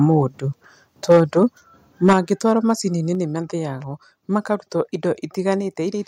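Speech peaks at 0.1 to 0.14 s, 1.1 to 1.43 s and 2.06 to 2.18 s turn harsh and crackly. This is microphone overload: the input was likely driven past the converter's ceiling by up to about 9 dB, so the tops of the loudest waveforms are sliced flat. The first burst is slight, the third is heaviest, with a few percent of samples cut. Unlike a volume change, the level stays the same while the tone becomes distorted.

Separately, the microphone volume stepped down at 1.12, 2.13, 3.15 (just before "nĩ mathĩyagwo makaruta") and 5.61 s. Voice and background together drop abruptly by about 2, 6, 4 and 3 dB. This is likely the call software cutting the input gain after loud or clipped peaks. The steps themselves only lower the level.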